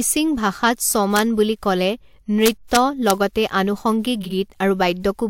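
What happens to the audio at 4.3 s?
Frames out of order hit the speech from 4.21 to 4.32 s. Two neighbouring blocks, each about 46 ms long, which fits one frame apiece, play swapped. That stretch comes out as a brief garbled flutter. No time is lost.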